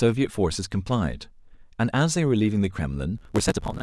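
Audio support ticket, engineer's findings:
Block size mismatch (truncated), 3.16–3.82 s: 75 Hz buzz, 1.6x speed-up with timbre kept, unlike a sample-rate fault. Block tails dropped, fitting 512-sample writes.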